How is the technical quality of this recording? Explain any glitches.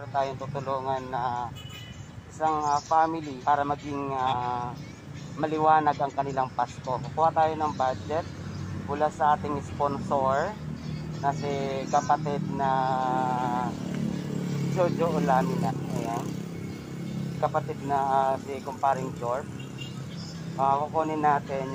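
The recording has one recurring fault: compressed frames skipped, at 3.35 to 3.44 s, 4.23 to 4.33 s, 15.65 to 15.71 s and 20.11 to 20.15 s. At each point whole compressed frames never reached playback, either missing or rejected as damaged by the decoder, so the audio jumps forward by roughly 100 to 200 ms.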